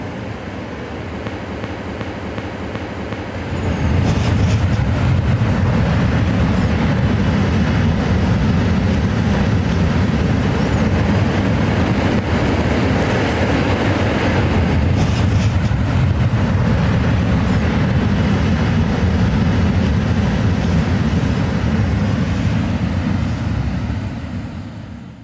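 Gain pumping runs the whole way through: the level keeps swelling and ducking by around 10 dB, likely from too much input gain with a fast limiter clamping down. From 1.49 to 3.34 s there's a system hang loop: one 372 ms chunk repeats five times at about 2.7 Hz, a skipping-record stutter that fits a 16384-sample buffer, with roughly two seconds of audio lost.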